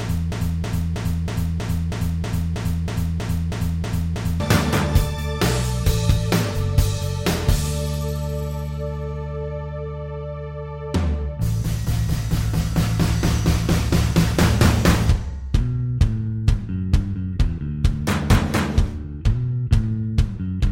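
From the very start until 4.4 s, a broken-record loop is already under way. A fragment of about 320 ms repeats exactly, back to back, 13 times. It sounds like a stuck, stuttering pulse with no forward movement. The likely cause is a player, encoder or stream that stalled and kept resending the last piece it held. Whatever audio belonged in those first seconds is gone, replaced by the repeats.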